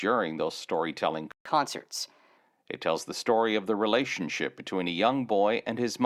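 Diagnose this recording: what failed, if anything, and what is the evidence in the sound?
The fault sits at the playback stage. Right after "those storytelling", the speech cuts to silence at 1.32 s and resumes at 1.46 s, a gap of about 138 ms. This is a playback stall. The output simply stops mid-flow and then resumes. The likely cause is the player's buffer running dry, or its audio thread being blocked, so nothing reached the output until it recovered.

The stall is followed by catch-up at higher speed, again in the player. From 1.46 s to 2.38 s the speech runs at 1.15 times normal speed. Its pitch rises by roughly two semitones, and both return to normal at the end of that stretch. The player is resampling its backlog to make up the lost time. That is why the timing and the pitch shift together rather than independently.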